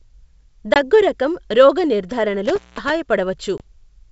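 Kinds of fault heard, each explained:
Packet loss on an ADPCM call: a single lost packet each time, about 20 ms of audio, leaves hard-edged silent holes at 0.74 s and 3.58 s. The decoder's adaptive predictor and step size drift from the sender's, so speech resumes with brief distortion before settling.
Intermittent contact: between 2.45 and 2.90 s a loose connection opens for roughly 194 ms, cutting the speech out with crackle at the break and remake, and faint hiss while the line is open, all heard over clean wideband G.722 coding at 64 kbit/s.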